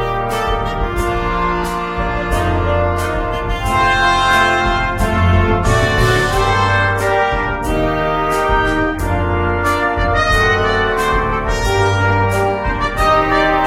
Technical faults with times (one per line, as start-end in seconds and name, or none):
none